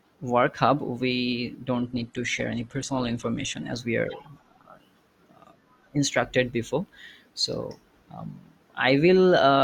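From 1.75 to 3.75 s the speech abruptly turns dull, losing everything above 12.1 kHz: an adaptive stream at a lower bitrate, consistent with a drop to around 16 kbit/s.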